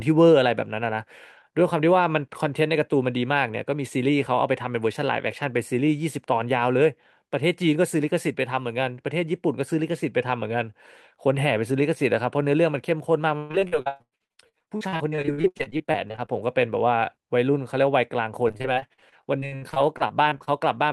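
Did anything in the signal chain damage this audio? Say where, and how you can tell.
Yes. The network stage caused repeated packet loss (robotic sound) from 13.37 to 16.30 s and again from 18.48 to 20.49 s. Dozens of short holes, up to 121 ms and 59 ms long respectively, were patched by extending the preceding sound, leaving choppy speech with pieces missing.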